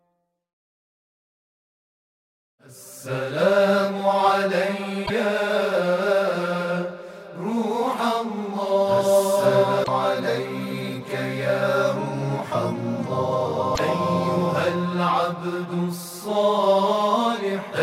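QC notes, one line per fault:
5.05–5.11 s, 9.81–9.88 s and 13.72–13.79 s: damaged data in a compressed stream. Each is a short chirp, squawk, click or hole of 50 to 80 ms where the decoder misreads corrupted frames and loses sync. The waveform shows an abrupt discontinuity.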